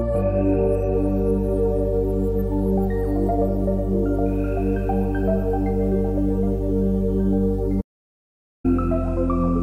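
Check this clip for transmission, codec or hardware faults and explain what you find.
One fault stands out, an audio dropout to silence. From 7.82 to 8.64 s, about 0.83 s, the input likely disconnected or muted while recording continued, so silence was written. The sound cuts off abruptly into dead silence with no room tone, then resumes mid-flow, and whatever occurred in that gap is lost.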